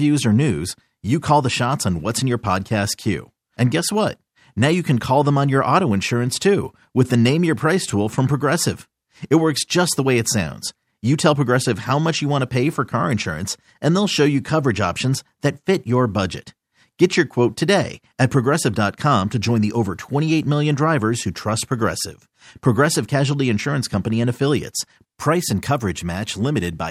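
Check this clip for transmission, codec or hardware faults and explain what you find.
No fault can be heard anywhere in the recording: the speech signal stays continuous and stable throughout.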